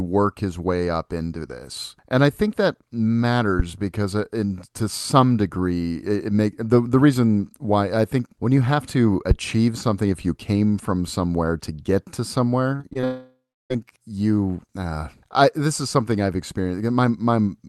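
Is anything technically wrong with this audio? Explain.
Yes. From 12.75 to 13.04 s, just after "somewhere to get to", there is repeated packet loss (robotic sound). Audio repeatedly arrived late or not at all, and the receiver patched about five short holes, the longest 36 ms, by extending the previous sound. Around 38% of that stretch is filled in, so it sounds choppy.

From 13.04 to 13.72 s the audio drops out completely, likely a long network dropout. The last sound is stretched into a fading buzz, then about 320 ms of silence follows. The audio resumes at "you uh I this" with the missing part gone. This happens on a call path whose high end stops near 12 kHz.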